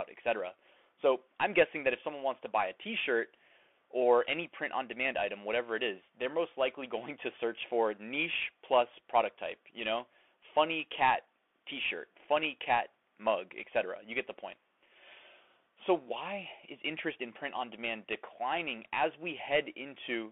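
Throughout the speech, the audio has passed through a Bluetooth CVSD headset codec, encoding each sample as a single up-or-down bit with an adapting step, at a rate consistent with a 64 kbps link. Sound is confined to roughly 250 Hz to 3.4 kHz, s sounds turn scratchy, loud bright passages distort, and a granular hiss sits beneath the voice.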